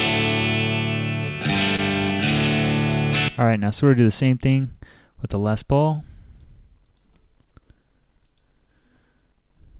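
At 1.76 to 1.80 s there is a short concealed packet loss. About 20 ms of audio never arrived, and the receiver covered it by extending the preceding sound before fading back in. It is heard as a brief smear. On a spectrogram it appears as a smooth, repeated stretch, all below 4 kHz like the rest of the call path's output.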